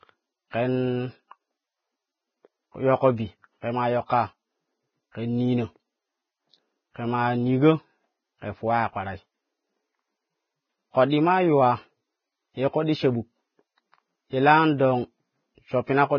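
Heavy codec damage, likely from Vorbis at a bitrate near 15 kbps, removes everything above 6.6 kHz and coarsely quantises the rest, leaving the speech dull, hissy and grainy. Pre-echo then appears as block-spread quantisation noise runs ahead of sharp onsets, putting a brief smearing hiss before the attacks at 0.51–0.53 s, 4.06–4.10 s and 8.41 s.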